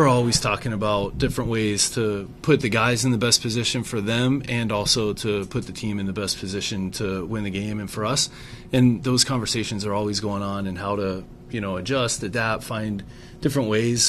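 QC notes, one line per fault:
4.43–5.28 s, CD scratch ticks: four brief clicks, each well under a millisecond, where a disc blemish exceeded error correction once per rotation and samples were patched.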